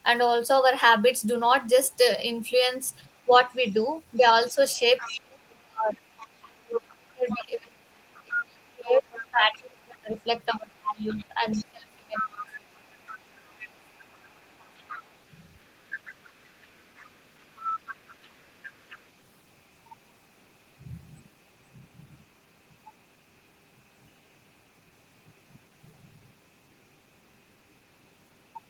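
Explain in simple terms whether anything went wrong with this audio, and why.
The other side's voice is leaking through. A second, fainter voice is heard at 3.31–3.73, 4.75–5.21, 6.17–6.27, 6.89–7.46, 8.28–9.85 and 11.1–19.03 seconds. It is strongest around 8.3 to 9.9 seconds. This is likely loudspeaker sound that the echo canceller failed to remove.

Speech is also suppressed in double talk. Between 4.17 and 12.69 seconds, the main voice dips and cuts out in pieces, for about seven seconds in total. At times it nearly vanishes. A short dip follows at 13.42–13.49 seconds. The likely reason is that both sides talked at once.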